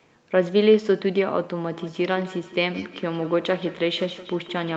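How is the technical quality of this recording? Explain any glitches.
The recording has one clear fault: a feedback echo between two devices, running from 1.71 s to the end. The speech carries the coding texture and an upper limit near 8 kHz, which points to an Opus call at roughly 40 kbps.

From 1.71 s each syllable returns at an interval of roughly 150 ms, with the strongest repeat about 16 dB below the direct speech. Two devices in the same room were on the call. One played back the other's transmitted audio, and that microphone captured it again. Each device's echo canceller only subtracts its own playback, so the loop went unchecked. Each pass comes back thinner and more ringing, trailing the speech like a short metallic stutter.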